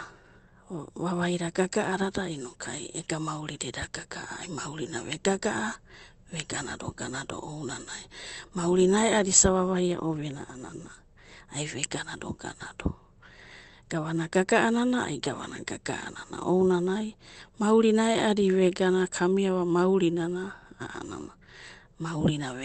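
No faults here: the speech went through an Opus call path at 24 kbps with 8 kHz bandwidth, which is normal for that setting.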